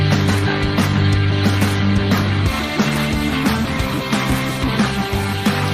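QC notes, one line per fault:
Nothing to flag here, as no faults turned up anywhere in this audio.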